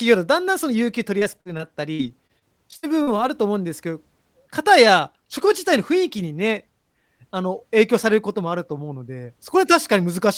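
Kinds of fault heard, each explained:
Repeated packet loss (robotic sound), 1.19 to 3.09 s: over these two seconds of speech, chunks of audio keep going missing in transit, and each hole is filled by stretching out the sound that came just before it. The holes are short, the longest about 58 ms, but they arrive in quick succession, so roughly 0.3 s in total, about 16% of the stretch, is patched rather than real. The repeated stitching makes the speech choppy, with pieces missing.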